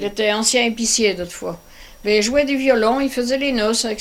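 No technical faults can be heard anywhere in this recording.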